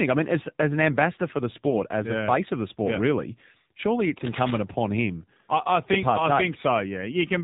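The whole clip is speech carried over the AMR narrowband mobile codec, and the coding damage is plainly audible. Nothing gets through above 4 kHz, so the top end is cut away and the voice sounds boxed-in and telephone-like. The buzzy, synthetic texture points to a low-rate mode, something like 7.4 kbps. The encoder rebuilds the voice from a vocal-tract model fed by a handful of pulses per 5 ms subframe, and at that rate there aren't many bits to get the detail right. There's also a lost AMR speech frame at about 1.70 to 1.75 s. A single 20 ms frame went missing, and you hear it as a short dip or warble. The decoder filled the gap by repeating the last good pitch and vocal-tract settings at reduced gain, and the voice comes back rough for a moment after. Then from about 4.17 to 4.58 s there's a stretch of cable scratch noise, a dense, uneven scratchy rustle sitting roughly 10 dB below the speech for a bit under half a second. 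That sound is typical of a worn cable, connector or control being moved, which makes the contact resistance jump around rapidly, and that's the likely cause here.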